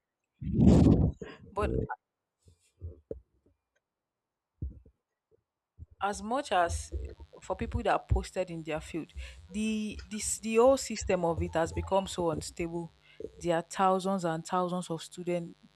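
A steady, raspy buzz enters this speech recording at 6.83 s, just after "as much", and carries on to the end, sitting roughly 40 dB below the speech. This is mains buzz on a 50 Hz supply. Sharp switching spikes from something like a dimmer or rectifier, or a gap in shielding, get into the signal twice per mains cycle. That stacks up harmonics of 50 Hz reaching into the kHz range, which gives the buzz its gritty edge rather than a smooth hum.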